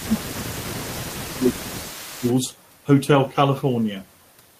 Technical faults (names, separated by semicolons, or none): speech suppressed in double talk; echo leak